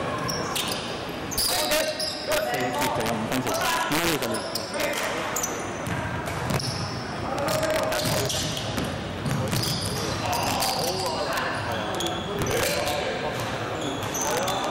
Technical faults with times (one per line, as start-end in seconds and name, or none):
0.00-14.70 integer overflow